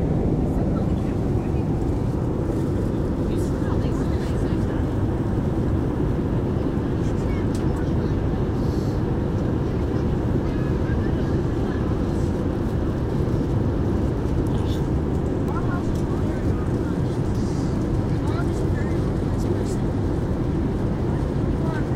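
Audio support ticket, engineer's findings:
Nothing stood out on listening; no issue found to attach to a component.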